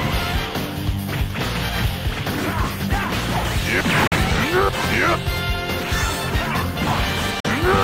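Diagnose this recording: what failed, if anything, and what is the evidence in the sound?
Digital broadcast dropout at 4.07–4.16 s and again at 7.40–7.50 s, a reception fault at the decoder. Each time the sound fades out within about 3 ms and returns after a brief hole. That fits one failed frame of roughly 43 ms muted by the receiver, and that audio is lost.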